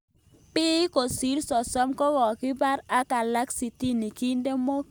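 Speech recording; no technical faults detected.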